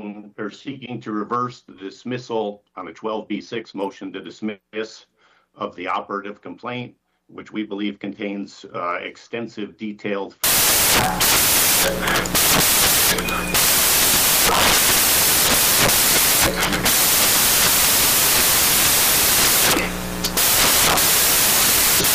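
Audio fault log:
10.44–22.14 s, samples built from the wrong bytes: from 10.44 s to the end, the bytes of each sample are assembled misaligned or in swapped order, so the rapidly varying low-order bits land in the most significant positions. The result is loud broadband noise, close to white on the louder passages.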